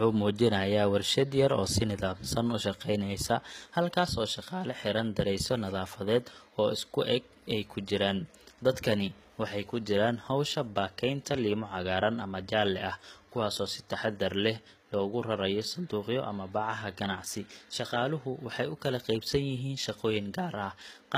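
From start to finish the treble of this speech sounds bright yet synthetic, with gritty, lispy s sounds and nothing above about 14.9 kHz. That points to HE-AAC compression, likely at a rate around 20 kbps. Unlike a simple low-pass, the upper band is rebuilt from copied lower bands, so its harmonics fail to line up.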